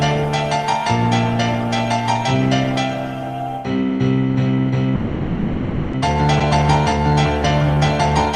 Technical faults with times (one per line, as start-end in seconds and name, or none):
4.95-5.95 call audio freeze
6.39-6.42 skip ahead